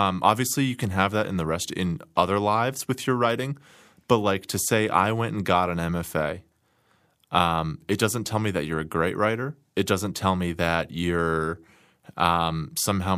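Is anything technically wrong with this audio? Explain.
No, nothing technically wrong turns up anywhere in this speech recording.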